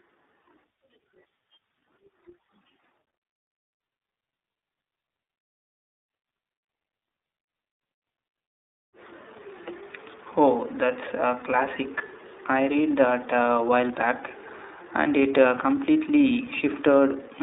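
From start to end, the speech carries iLBC codec damage. The band is cut to about 300 Hz to 3.7 kHz, so it sounds thin and muffled. Each 30 ms frame is coded alone, leaving a rough, synthetic edge that fits the 13.33 kbps mode.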